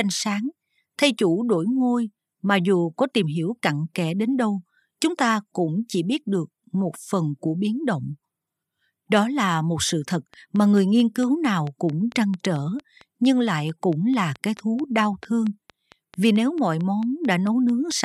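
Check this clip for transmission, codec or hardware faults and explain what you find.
There's one fault here, a train of clicks. From 9.89 s, right after "là một", to 17.92 s, around forty evenly spaced ticks arrive about 4.5 times a second, peaking roughly 5 dB above the speech. Likely nearby equipment interference or a faulty connection or power supply is injecting the repeated pulses.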